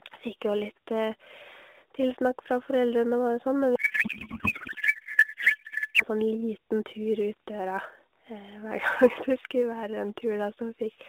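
Sample clock jitter runs throughout. A few microseconds of timing wobble leaves a hiss roughly 30 dB under the speech that thickens on loud, bright passages, visible as faint broadband haze tracking energy on the spectrogram.

From 3.76 to 6.05 s, a codec payload misread turns the speech into garbled warbling noise, consistent with octet-aligned AMR frames parsed as bandwidth-efficient. The spectrogram loses its harmonic striping, showing smeared texture within the 250 Hz to 3.7 kHz narrowband line.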